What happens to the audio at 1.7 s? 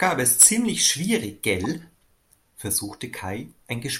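A corrupt frame decoded at 1.64–1.66 s: damaged bits in a few compressed frames were played anyway, misplacing energy into a short chirp, squeak, blip or burst of noise peaking around -20 dBFS.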